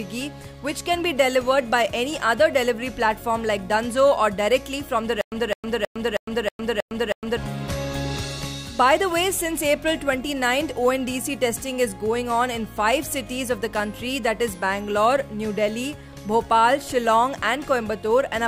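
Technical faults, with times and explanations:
5.21–7.37 s, stutter with silent gaps: the same fragment of about 210 ms plays, cuts to dead digital silence for about 108 ms, then returns, seven times over at a steady period of about 318 ms, like a stuck skip. The likely cause is a player or stream stall: on each retry it replayed the last buffered piece, then ran dry. Whatever should have sounded across those two seconds is simply missing.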